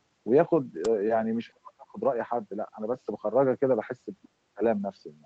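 At 0.85 s an uninitialised buffer goes out: for about 0.67 ms, which fits a 32-sample block, leftover memory plays as if it were audio. It is heard as a sharp, loud click of digital noise. The waveform shows a sudden spike and back. The spectrogram shows a thin vertical stripe running up the whole band, which ends at 8 kHz as the call's microphone processing limits it.

From 1.50 to 1.99 s the speech is pushed down, falling by about 40 dB at its deepest over roughly half a second. The likely cause is speech suppressed in double talk: the far side was talking too, and the echo canceller, unable to tell the near talker from loudspeaker echo, turned everything down. It sounds like the talker fading or cutting out in pieces. The waveform's envelope collapses to a thin band, and the spectrogram goes dark, with the upper harmonics vanishing.

At 4.22 to 4.26 s a brief scrap of a second voice comes through, about 30 dB below the talker. 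This is likely the other side's voice leaking through, loudspeaker sound the echo canceller failed to remove. It is faint and clipped short, a small separate patch of harmonics in the spectrogram with barely any trace in the waveform.

Straight after, from 4.26 to 4.61 s, the talker is suppressed again, by about 40 dB at its deepest over roughly a third of a second, most likely the echo canceller clamping down once more during double talk. It sounds like another dropout, and it looks the same as the earlier one: a pinched waveform and a dark gap in the spectrogram.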